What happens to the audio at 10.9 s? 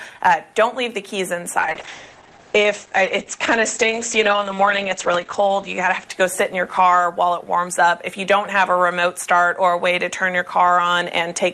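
Nothing goes wrong at 10.9 s; the audio there plays through intact, with no dropout, click or distortion.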